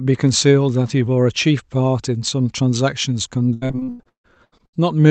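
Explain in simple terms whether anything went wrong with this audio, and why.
From 3.53 to 4.81 s the speech turns choppy and robotic. This is repeated packet loss: missing pieces, about half that stretch, were patched by stretching earlier sound.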